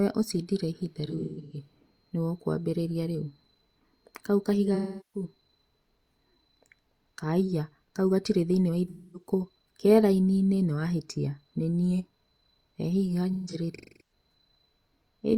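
Speech with AAC frame loss with concealment at 1.07–1.57, 4.74–5.24, 8.88–9.29 and 13.33–14.12 s: smeared, phasey fill-ins from the last good spectrum, not the hard silent gaps of plain dropouts.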